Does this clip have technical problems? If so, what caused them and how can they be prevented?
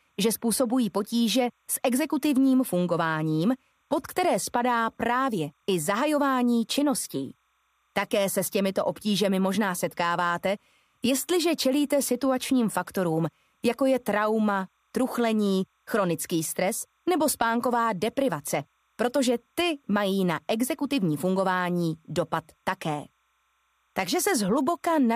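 Yes: timecode bleed, as 30-frame linear timecode leaks from a nearby track or cable, adds a faint chirping warble near 1 and 2 kHz throughout, about 45 dB down. Route timecode on separate, shielded cables and tracks kept well away from audio lines.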